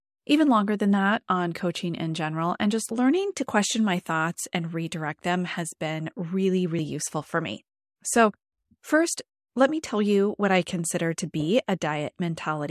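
No technical faults can be heard anywhere in this speech recording. There is nothing in it that needs a time stamp or a correction.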